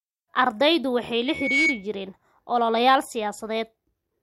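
From 1.26 to 1.87 s, after "waxa ay" and before "jireen ololeyaal", loudspeaker feedback squeal appears: the microphone re-amplifies its own loudspeaker, and a 2.2 kHz tone swells over about a third of a second into a squeal standing a few decibels above the speech.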